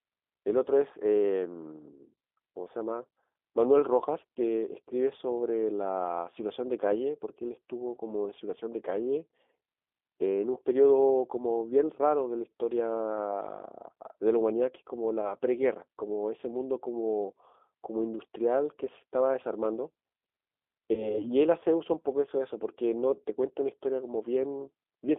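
From start to end, the speech carries G.729 codec damage. It sounds rough and slightly synthetic, which fits 8 kbit/s coding. The band runs from about 300 Hz to 3.6 kHz. Nothing brighter survives.

At 15.21 s, VoIP packet loss concealed by the speech codec appears. About 20 ms is missing, which fits one lost packet. The decoder stretches the last sound, which fades until 15.35 s. At 20.93 s, a 40 ms gap, likely two packets, smears the sound again. It stays weak or distorted until 21.27 s.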